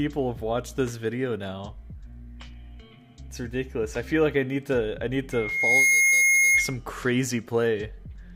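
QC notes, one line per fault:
5.32–6.77 s, loudspeaker feedback squeal: a pure 2.2 kHz tone swells over roughly half a second to about 10 dB above the audio, as microphone-to-speaker loop gain exceeds unity at that frequency; a bright horizontal spectrogram line, with waveform envelope ballooning until cut off.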